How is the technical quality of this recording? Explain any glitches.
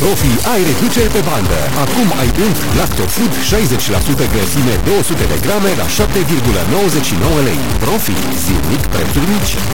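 The technical quality is poor, with one fault running through the whole clip. Low bit depth without dither is present from start to finish. The grainy distortion points to a likely cause of truncation to about 3 bits, with error nearly as loud as the sound itself. It sounds like coarse grit that rises and falls with the signal, and the quietest passages sputter or drop out. A steady hiss would sit independently underneath, so this grit following the sound distinguishes it.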